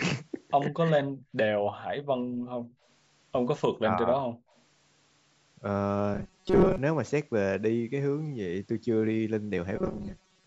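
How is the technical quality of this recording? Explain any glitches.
The speech has several audible glitches. The room background drops out in places, the talker's level sinks twice, a faint echo appears once, and the sound turns buzzy and robotic twice. The lowest bass is filtered out, as expected from call microphone processing.

Speech suppressed in double talk: From 0.69 to 0.96 s and from 3.73 to 4.24 s, the voice sinks by around 15 dB and loses presence for brief stretches. The likely cause is that both ends were talking at once. The echo canceller could not tell this talker apart from the loudspeaker's echo, so it pulled the whole microphone signal down rather than risk sending echo back.

Background gated by the echo canceller: The room tone ducks at 1.24 to 1.32 s (about 17 dB), then at 1.55 to 1.73 s and 2.02 to 2.85 s (both about 35 dB). The last two are near-silences, and the longest lasts most of a second. 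These dips happen while the loudspeaker is playing. The canceller clamps the microphone hard and releases it when playback stops.

Echo leak: Between 4.5 and 4.6 s there is a very faint delayed copy of speech, arriving 132 ms late and far below the main voice. It is likely residual loudspeaker sound that the far side's echo canceller failed to remove fully, so it was transmitted back. It is heard as a brief ghost rather than a clear repeat.

Robotic sound from repeated short buffers: From 6.14 to 6.78 s and from 9.76 s to the end, the sound takes on a rigid metallic buzz at 188 Hz, which fits a buffer of about 5.3 ms. The cause is likely that audio arrived too late, so the playback side kept looping its last short buffer. That skips roughly two-thirds of the real signal in the first stretch and about half in the second.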